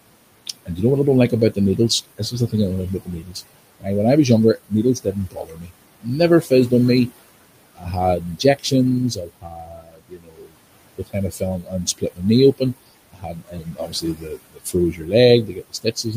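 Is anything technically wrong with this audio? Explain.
Yes. A noise suppressor is audibly acting on this speech throughout, and in several stretches it mistakes parts of the speech for noise.

Noise suppressor artifacts run through the whole clip. The room noise sits about 16 dB below the speech, and the suppressor pulls it down by about 21 dB wherever it judges a band to hold only steady noise. It does this frame by frame, so the background drops away in pauses and returns under the speech. On a spectrogram the noise floor looks blotchy and speckled, flickering on and off between syllables instead of forming an even haze.

Speech cut by the noise suppressor happens in four spans: 0.47 to 1.57 s, 2.18 to 3.88 s (ending just before "when I was younger"), 4.58 to 7.1 s (starting right after that phrase), and 7.75 to 16.14 s. Soft consonants and quiet word endings are treated as noise and lowered along with the background, by up to about 14, 18, 21 and 22 dB respectively. 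The affected portions total roughly 0.15 s, half a second, 0.7 s and about 4 s, so the damage grows through the clip. These parts sound swallowed or faint. On the waveform, syllable tails drop sharply in level, and on the spectrogram high-frequency consonant energy is missing or patchy.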